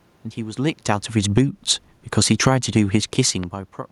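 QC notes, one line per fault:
0.69–1.52 s and 2.03–2.67 s, automatic gain falling: the automatic gain control judged the input too loud, or its background noise too strong, and pulled its gain down gradually, by about 5 dB and then about 6 dB. Voice and room noise sink together over those spans, which shows this is a level change and not the talker moving. On a waveform the envelope tapers smoothly across each span. On a spectrogram all bands, including the noise floor, dim together.
1.43–1.82 s and 2.59–3.23 s, automatic gain rising: the gain control found the input too quiet and raised its gain, by about 3 dB and then about 4 dB. In the second span the input had dropped by about 18 dB, and the control only partly made up for it. Voice and background swell together. The waveform envelope climbs gradually, and the spectrogram brightens evenly across frequency, noise floor included.
3.43–3.46 s, loud pop: a single sharp pop lands on top of the speech, roughly 10 dB above the signal's level, while the sound carries on underneath. 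A sudden voltage step or pulse, likely from a plug, switch, static discharge or driver glitch, was added to the signal and shaped by the circuitry that follows. On the waveform it is a narrow spike standing well above the envelope. On the spectrogram it is a thin vertical stripe spanning the full frequency range.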